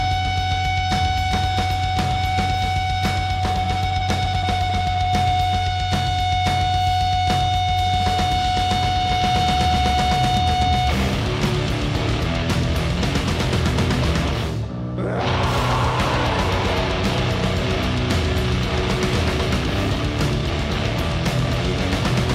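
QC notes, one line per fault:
16.71 s, dropped buffer (overrun): a small forward jump in the sound and no gap of silence, as if roughly 10 ms of audio is missing and the material on either side is butted together. The likely cause is the capture software failing to collect a buffer before the hardware overwrote it.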